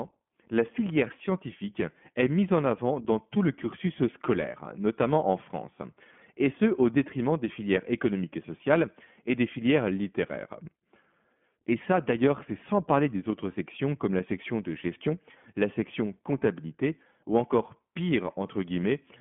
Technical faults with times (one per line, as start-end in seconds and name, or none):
0.00-19.21 iLBC codec